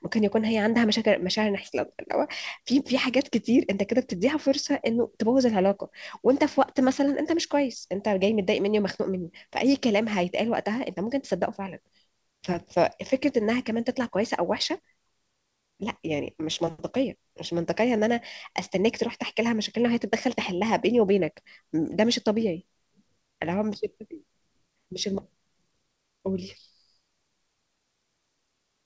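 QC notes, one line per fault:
1.64–1.66 s, skip ahead: the speech jumps abruptly forward with no gap or fill, losing roughly 0.4 s of material, and the two sides butt together directly. Audio was dropped while later packets were already waiting, so playback simply resumed further on.
3.66–5.30 s, jitter buffer speed-up: the speech runs about 6% fast at unchanged pitch and sounds slightly hurried. The jitter buffer held too much audio and cut short pitch-period pieces repeatedly, removing roughly a tenth of a second to reduce delay.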